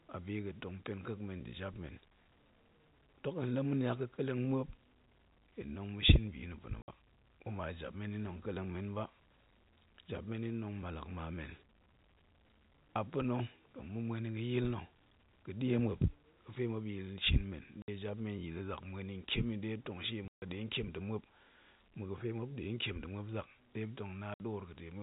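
Packet loss filled with silence at 6.82, 17.82, 20.28 and 24.34 s: lost packets replaced by dead air, leaving hard-edged holes of 60 ms, and 140 ms at 20.28 s, which fits 20 ms packets.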